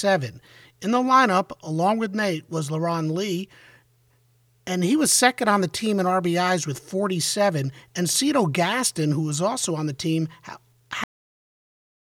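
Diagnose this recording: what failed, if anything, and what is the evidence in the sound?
Cut-off end at 11.04 s. The speech stops abruptly in the middle of a sound and falls straight to digital silence, with no decay or room tail, and that silence holds for the remaining second or so of the file. The failure sits at the buffer and storage stage: the final buffers of audio were never written to the file, so the recording simply ends where the last complete buffer was flushed, mid-utterance.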